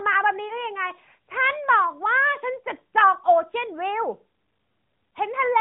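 At about 0.48 to 0.53 s, a single lost AMR speech frame of 20 ms causes a brief dip or warble. The decoder failed the frame's checksum, reused the previous pitch and vocal-tract settings at reduced gain, and recovered on the next good frame, all within the sound's 4 kHz narrowband limit.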